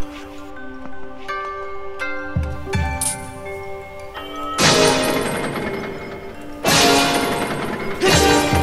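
From 0.50 s to 2.50 s the audio turns dull and muffled, the signature of de-emphasis applied wrongly: a treble-cut curve meant to reverse pre-emphasis has been imposed on material that never carried that boost, or applied a second time, so the top end rolls away smoothly, reaching about 11 dB down at 10 kHz relative to 1 kHz. On a spectrogram that two-second stretch shows visibly fainter energy above a few kHz, fading progressively upward, while the waveform looks rounder and less spiky.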